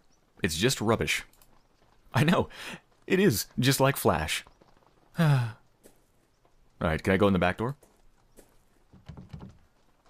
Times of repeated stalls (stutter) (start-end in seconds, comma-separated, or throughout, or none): none